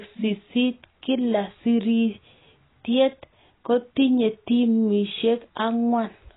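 Speech with heavy AAC compression throughout: nothing reaches above 3.9 kHz, so the sound is dull and band-limited, with smeared, warbling texture on sustained sounds and sibilants. The likely cause is AAC-LC coding starved of bits, which fits a bitrate around 16 kbps.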